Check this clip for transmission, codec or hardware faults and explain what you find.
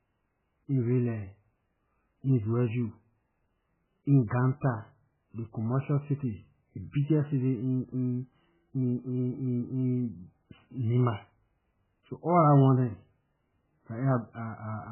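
One codec fault runs through the whole recording: heavy MP3 compression damage on the speech from start to finish. Nothing is audible above 3 kHz, so sibilants and consonant detail are gone and the speech sounds dull and boxed-in. The cause is likely an MP3 encoder starved of bits, which fits a very low rate around 8 kbps. To save bits, the encoder cuts all treble at a fixed point and discards weak frequency lines. Because those lines drop in and out from frame to frame, the remaining sound turns watery and swirling, and word onsets are smeared.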